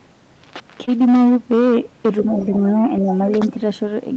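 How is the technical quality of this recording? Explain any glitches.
The recording has clear technical faults: constant overload distortion, one brief dropout, and echo-control problems in the second half. The speech is band-limited at 8 kHz, as expected from a call codec such as Opus in wideband mode.

Hard clipping runs through the whole clip. The signal is driven about 8 dB past what the chain can pass, so a modest share of the loudest peaks are cut flat. Those squared-off tops create harmonics high in the spectrum, heard as a harsh, crackly fuzz on loud sounds. In a waveform view the peaks sit as flat plateaus. On a spectrogram, vertical smears of broadband energy line up with the loud moments.

Short concealed packet loss occurs at 0.85 to 0.89 s. About 20 ms of audio never arrived in time, and the receiver covered the gap by extending the preceding sound, then crossfaded back into real audio. 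It is heard as a tiny smear or wobble, a blurred instant rather than a silence. The waveform shows a slightly too-regular stretch.

Faint second-voice leakage appears from 2.23 to 2.45 s, likely the other side's voice leaking through. The far party's audio played on the talker's loudspeaker was not fully removed by the echo canceller. It sits roughly 20 dB below the main speech. A spectrogram would show a weak, separate set of harmonics running beneath the main voice for that fifth of a second.

The talker's voice dips by a few decibels from 2.24 to 2.66 s, in pieces adding up to about 200 ms, and again from 3.02 to 3.13 s. This is likely speech suppressed in double talk. With both sides active, the echo canceller turned the near talker down along with the echo. The voice sounds briefly ducked. The waveform envelope shows shallow notches in level, and the spectrogram shows the energy fading momentarily.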